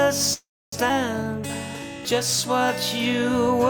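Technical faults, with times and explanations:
0.33–0.74 s, call audio freeze: the sound stops and is replaced by a short continuation of its last moment that fades out, followed by about 270 ms of silence, with the whole hold lasting about 390 ms. When the audio returns it picks up exactly where it stopped, so nothing is lost and everything after is simply pushed about 390 ms later. The likely cause is packets delayed in transit, leaving the jitter buffer empty and forcing the receiver to extend and then mute the last audio.
0.88–0.91 s, skip ahead: playback jumps forward with almost no gap, only about 8 ms of filler bridging the join, and roughly a third of a second of audio is missing. The two sides of the cut sit almost directly against each other, so the sound lurches abruptly instead of pausing. This happens when a stretch of audio is discarded while later audio is already waiting, as when a jitter buffer catches up after a stall, and it wins back most of the delay added by the earlier freeze.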